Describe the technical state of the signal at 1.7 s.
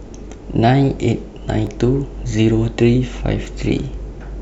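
At 1.67 s there is a block of digital silence lasting about 0.67 ms. The signal cuts out and returns without a fade, heard as a tick or dip.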